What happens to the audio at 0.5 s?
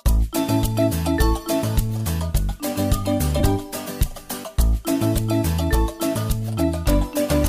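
Nothing goes wrong at 0.5 s; the audio plays through that moment intact, with no dropout, click or other fault.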